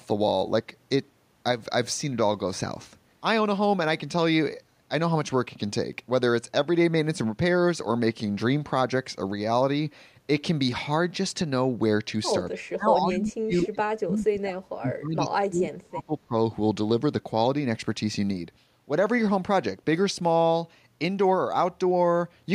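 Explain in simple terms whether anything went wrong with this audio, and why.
Speech suppressed in double talk, from 12.64 to 16.36 s: the voice sinks sharply and drops out in patches, about three seconds in all. The likely cause is both sides talking at once, so the call's echo control turned everything down rather than just the echo.

Echo leak, 13.15 to 13.19 s: a faint, brief copy of the voice is heard about a quarter of a second (235 ms) late. Most likely a speakerphone's echo control missed a scrap of what its microphone picked up, and sent it back.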